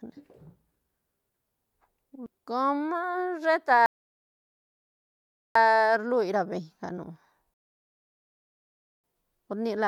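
At 3.86 s the speech drops into dead silence for about 1.7 s, then picks up at 5.55 s exactly where it broke off. The same happens again from 7.54 s to 9.04 s, a gap of about 1.5 s. These are rebuffering stalls: the player exhausted its downloaded audio and paused until more data arrived. Nothing is skipped or repeated, but each stall inserts silent time into the speech.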